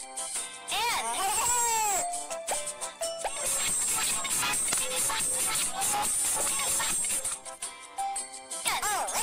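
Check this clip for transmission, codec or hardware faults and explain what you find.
Two kinds of fault are present: three tiny skips and one brief corrupted burst.

At 1.22, 3.21 and 7.19 s the audio jumps forward by about 10 ms with no gap of silence, likely audio missing between chunks on a 2-second cycle. These are splices, not garbled sound.

From 4.69 to 4.74 s, damaged data in a compressed stream makes the decoder lose sync, producing a short glitch rather than a clean skip.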